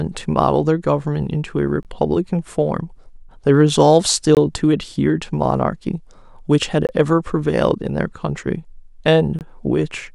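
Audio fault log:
1.83–1.85 s, 4.35–4.37 s, 6.87–6.89 s, 9.39–9.41 s: gap between chunks. The speech stops for 20 ms of hard-edged silence at each join, then resumes exactly where it left off. It was delivered in 2.5 s pieces with a short silence inserted between them. Unlike a dropout, none of the speech is missing, only pushed later. The holes recur at a fixed 2.52 s spacing rather than at random.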